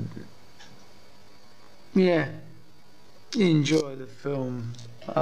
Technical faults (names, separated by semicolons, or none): time-stretched section